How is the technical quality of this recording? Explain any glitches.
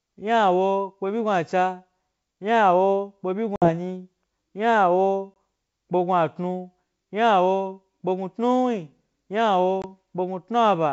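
The recording has three dropouts from packet loss on an ADPCM call, over G.722 wideband coding that stays clear up to about 7 kHz.

Dropouts occur at 3.56–3.71 s (just after "byi gnu", about 60 ms, fitting roughly three lost packets), 5.34–5.36 s and 9.82–9.85 s (20 ms each). Each lost packet was filled with silence. The decoder's predictor and step size then drifted from the sender's, so the speech returns slightly distorted before settling.

The waveform shows flat gaps with sharp edges. A spectrogram shows blank vertical strips.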